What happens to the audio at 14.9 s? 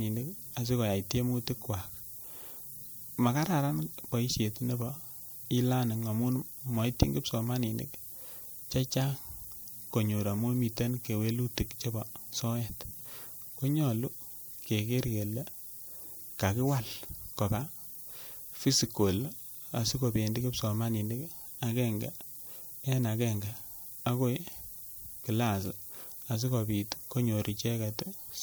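At 14.9 s the speech sits on a steady, thin hiss that climbs sharply toward the top of the band. It comes from low bit depth with noise shaping, present throughout: 8-bit rounding error is pushed upward in frequency, leaving noise roughly 15 dB below the speech.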